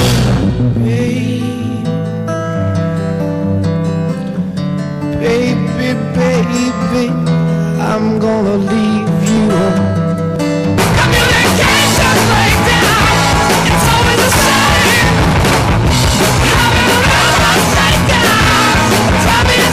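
A harsh fuzz sits on every loud moment from start to end: hard clipping, with the signal driven about 16 dB past full scale, flattening nearly a third of all samples. From 9.37 s to 19.26 s, regular ticks land every 0.99 s, about ten in all. These are periodic USB or driver dropouts, each skipping roughly 10 ms of audio when the driver stalls.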